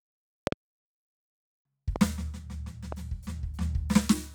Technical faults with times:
0.47-0.54 loud pop
1.96-1.98 loud pop
2.92-2.94 loud pop

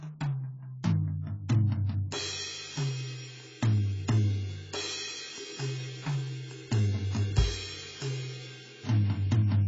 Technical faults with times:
0.00-9.67 AAC compression

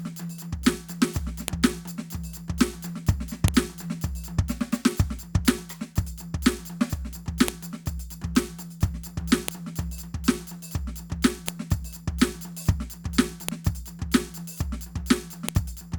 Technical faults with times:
1.48 file header played as audio
3.48 file header played as audio
5.48 file header played as audio
7.48 file header played as audio
9.48 file header played as audio
11.48 file header played as audio
13.49 file header played as audio
15.49 file header played as audio

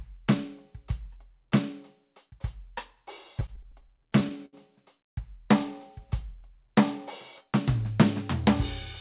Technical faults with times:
3.40-4.55 repeated stalls (stutter)

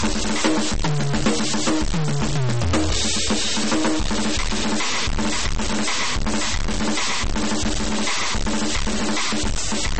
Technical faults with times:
0.00-9.99 stuck bit
0.00-9.99 MP3 compression

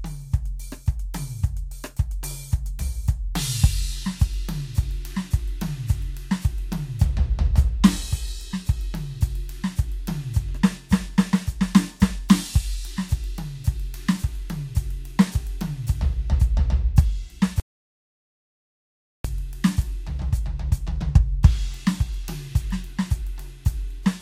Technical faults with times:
17.60-19.24 audio dropout to silence

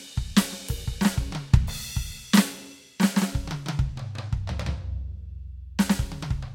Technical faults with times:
none

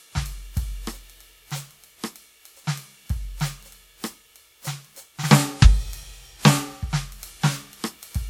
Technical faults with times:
0.00-8.29 generation loss

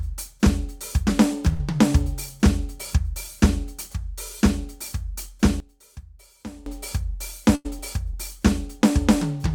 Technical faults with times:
1.53-1.61 burst of packet loss
5.60-6.66 one channel inverted
7.55-7.67 burst of packet loss

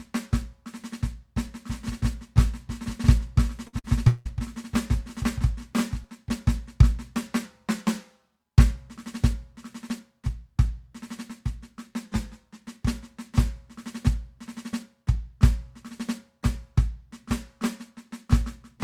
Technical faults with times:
1.65-6.05 doubled audio track
3.67-3.87 burst of packet loss
4.08-4.28 long network dropout
7.45-8.40 drift correction step
12.05-12.66 drift correction step

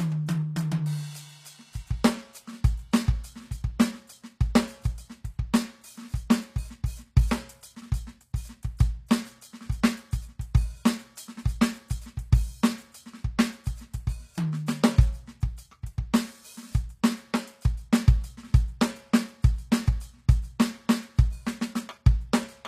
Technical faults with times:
0.00-22.68 HE-AAC compression

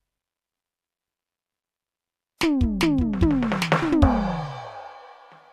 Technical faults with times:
none

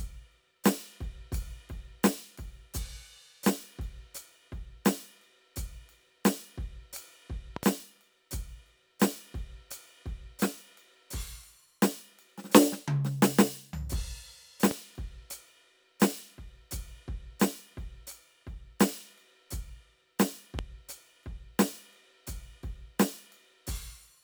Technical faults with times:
7.56-7.65 loud pop
14.71-14.73 loud pop
20.59-20.61 loud pop

